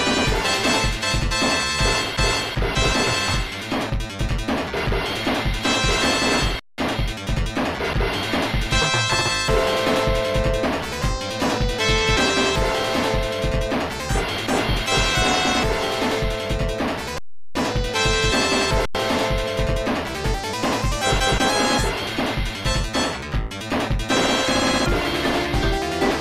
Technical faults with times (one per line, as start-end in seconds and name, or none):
6.59-6.78 underrun with held sample
17.18-17.55 underrun with held sample
18.85-18.95 underrun with held sample